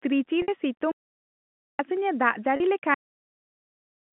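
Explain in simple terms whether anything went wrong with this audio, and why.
Two things went wrong. At 0.42 to 0.48 s and 2.56 to 2.60 s there is packet loss with pitch repetition. Bits of the signal went missing, and the receiver repeated the last sound to fill each gap. It briefly sounds held and buzzy.

There are also two digital wireless dropouts. From 0.91 to 1.79 s, and from 2.94 s to the end, the link lost too much data. The receiver muted, leaving clean, silent holes with no noise around them.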